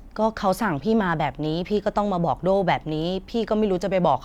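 No technical faults can be heard anywhere in the recording.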